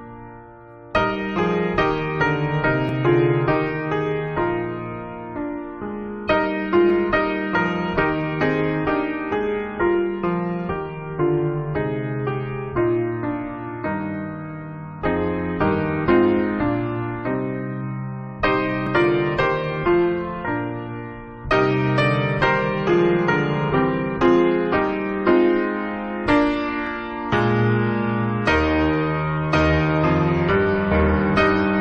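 Brief skips occur at 2.89, 6.90, 18.87 and 26.87 s. Each is an overlap between stream segments. Adjacent 4.0 s segments claimed the same moment, so the player cut 6 to 18 ms of real sound. The waveform jumps, giving a tiny skip.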